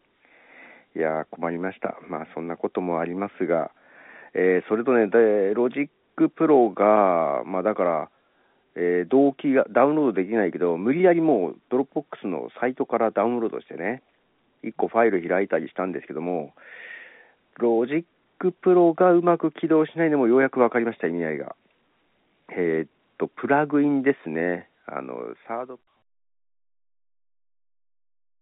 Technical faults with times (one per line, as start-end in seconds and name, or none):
none